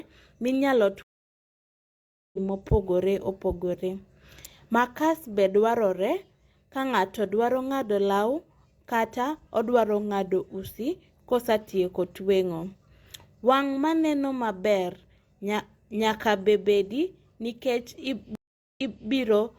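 At 1.03 s the speech cuts out into 1.31 s of silence and returns at 2.38 s about a second and a half further on, so a stretch is simply missing. At 18.35 s a shorter 0.41 s gap ends at 19.09 s with the speech picking up 0.33 s earlier, repeating a fragment. Both are stream reconnects: the connection dropped, the player went quiet, reconnected and restarted its decoder mid-stream at a different point.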